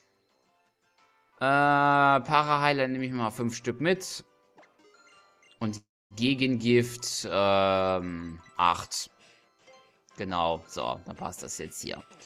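At 5.77 s the audio stops and a call audio freeze runs until 6.14 s: the last sound stretches into a brief fading buzz, then about a quarter-second of silence. Nothing is lost. The sound resumes where it stopped, now about 330 ms late, likely from delayed packets emptying the jitter buffer.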